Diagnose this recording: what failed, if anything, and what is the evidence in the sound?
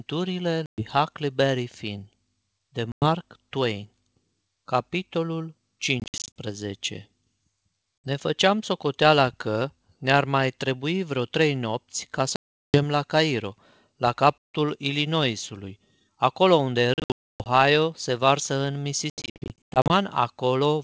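Network stage: packet loss on an ADPCM call, with hard-edged silent holes at 0.66–0.82, 2.92–3.06, 6.0–6.29, 8.06, 12.36–12.83, 14.39–14.55, 16.94–17.46 and 19.1–19.93 s. The waveform drops flat to silence and the spectrogram shows blank vertical gaps. Afterwards the G.722 decoder's predictor and step size are out of step, so the audio returns slightly distorted.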